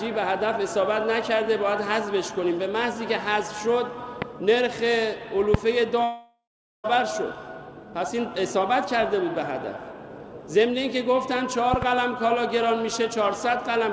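At 4.22 to 4.24 s a loud pop cuts through, a sharp click roughly 15 dB above the surrounding sound, which carries on underneath. It was likely caused by a voltage step from a plug, switch or static discharge. A second loud pop follows at 5.54 to 5.57 s, harder still at around 20 dB. On a waveform each shows as a tall, narrow spike standing well clear of the envelope. On a spectrogram each is a thin vertical stripe running across every frequency.

From 6.04 to 6.86 s comes a long network dropout. Roughly 0.8 s of audio was lost, likely because packets stopped arriving. The receiver fills the gap by stretching the last sound into a fading buzz, and for the final 0.4 s or so there is only near-silence before the sound resumes without the missing part. The waveform shows the envelope collapsing into a smooth, dying tail and then a flat line. The spectrogram shows a smeared, repetitive texture that fades to a blank band.

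At 11.74 to 11.85 s there is another loud pop, this time a pair of thumps in quick succession at about 15 dB. These appear as twin spikes on the waveform and two vertical lines on the spectrogram.

Throughout the clip, the call path's G.722 coding at 64 kbps leaves nothing above 8 kHz, so the spectrogram is empty above that line.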